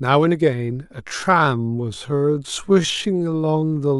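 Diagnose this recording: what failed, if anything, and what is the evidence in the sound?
From 1.0 s to the end the speech suddenly drags to about 0.59 times speed at unchanged pitch: likely a time-stretched section, padded by repeating short fragments.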